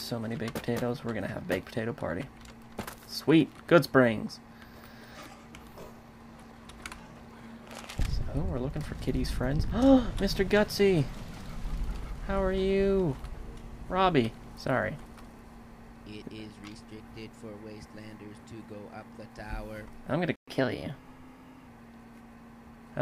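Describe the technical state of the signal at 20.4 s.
At 20.4 s the player most likely ran short of buffered data, or its output thread was held up, so nothing reached the output for a while. This is a playback stall: the audio cuts out mid-flow at 20.36 s and stays silent for 120 ms, until 20.48 s, when sound resumes.

Having fallen behind, the player then works off its backlog by resampling faster, which produces the catch-up at higher speed. From 20.48 s to 21.68 s the audio runs at 1.1 times normal speed, and because resampling shifts pitch along with tempo, everything sits roughly a semitone and a half sharp. The rushed, slightly raised stretch then drops back to normal speed and pitch once the lost time is recovered.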